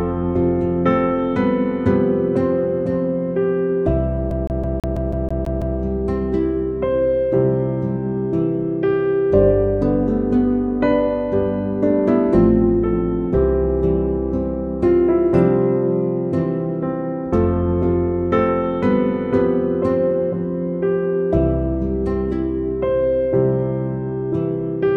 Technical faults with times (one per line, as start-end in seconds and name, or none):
4.31-5.78 CD stuck on one turn